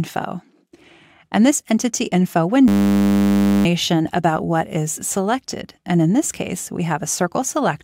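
At 2.68 s a system hang loop kicks in: a 10 ms slice of audio repeats until 3.65 s, giving a steady 100 Hz buzz, with about a second of sound lost.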